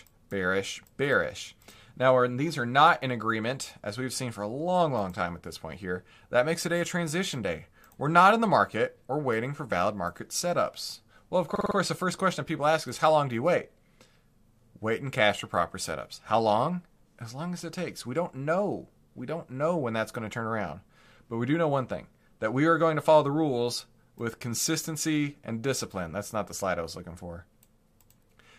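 Speech, with a fault of repeated frames from 11.55 to 11.76 s. A short slice of sound, about 52 ms long, plays again four more times in a row. This gives a quick mechanical stutter. The slice length fits a pair of compressed frames being written or sent more than once, so the decoder played them again. The repeats add about 209 ms, so everything after 11.76 s arrives later than it should.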